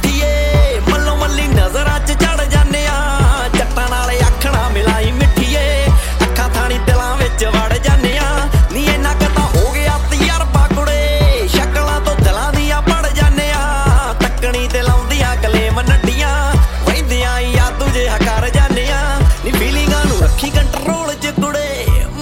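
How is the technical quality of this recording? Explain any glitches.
The recording has one glitch. From 3.34 to 5.97 s a hard, raspy buzz at 217 Hz, rich in harmonics, sits steadily about 20 dB below the sound. This is GSM phone buzz: a nearby 2G phone in a call bursts 217 times a second, and the audio circuitry rectifies those radio pulses.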